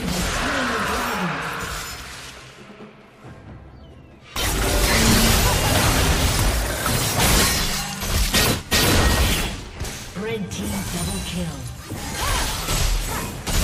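Faint, evenly spaced ticks run through the sound from 0.17 s to 13.55 s, about seven per second. These are clock slip clicks, likely from two unsynchronised clocks about 150 ppm apart dropping or repeating single samples. Unlike buffer dropouts, each is tiny and perfectly regular, with no gap.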